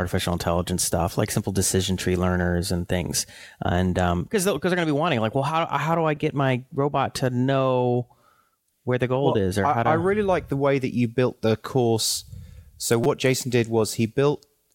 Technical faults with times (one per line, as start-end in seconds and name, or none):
6.16 repeated buffer
11.38 repeated buffer
13.04 repeated buffer